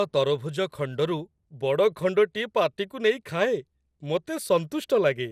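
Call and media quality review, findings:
Speech, whole clip: swirly, hollow, smeared, with soft consonant attacks and nothing above 15.8 kHz. Generation loss, likely from several lossy re-encodes, roughly four passes. The sound fits an MP2 chain at 96 kbit/s. Each pass requantises on a shifted frame grid, so noise and spectral holes stack up and it ends up murkier than one pass at that bitrate would be. Worth checking where the media gets transcoded along the path.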